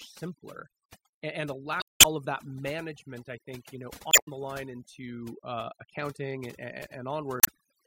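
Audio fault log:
Throughout: overdone noise removal. The noise reduction is set too hard, so individual frequency bands near the noise estimate are pulled down or gated off, taking quiet speech detail with them. The background drops and breaks up into twinkling specks.
1.79 to 2.05 s, 4.10 to 4.28 s, 7.40 to 7.49 s: damaged data in a compressed stream. Corrupt frames in the compressed stream are misread or rejected, and the decoder loses sync while hunting for the next valid frame header. Each event is heard as a short disturbance where the stream is misdecoded.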